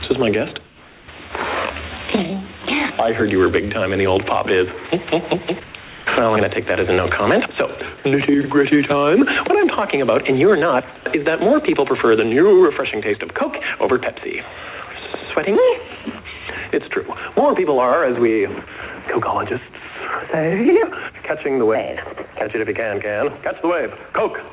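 At 0.66–1.08 s, 5.64–5.74 s, 5.84–6.06 s and 10.96–11.06 s, the background turns flat and featureless. This is likely comfort noise in place of the background, generated while transmission paused. The first patch drops about 4 dB, the middle two about 2 dB. Through the call path, nothing above 4 kHz comes through.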